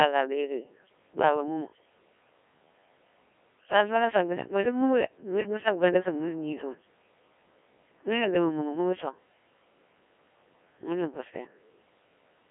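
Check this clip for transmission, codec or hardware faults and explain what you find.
A single codec fault runs through the whole clip. Codec 2 vocoder damage throughout: the speech is rebuilt from pitch, voicing and envelope, so it sounds robotic and buzzy, and the spectrogram shows nothing above 3.5 kHz. The heavy smearing fits a 1.3 kbit/s mode.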